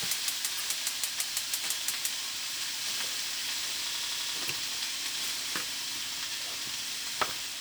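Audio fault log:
0.56 to 0.61 s, 2.78 to 2.82 s, 4.46 to 4.50 s and 7.51 s: damaged data in a compressed stream. At each point, bytes in the compressed stream were corrupted, so the decoder could not parse those frames, lost frame sync and skipped forward to the next valid header. Each spot is a brief chirp or blip lasting roughly 40 ms; the last one at 7.51 s is even shorter.
3.93 to 4.35 s: system hang loop. The host stalled while the audio hardware kept replaying the same ring buffer. An 85.33 ms slice, which fits a 4096-sample buffer, repeats five times at 11.7 Hz. This produces a rapid machine-gun stutter instead of a steady buzz. When playback recovers, roughly 0.4 s of sound is missing.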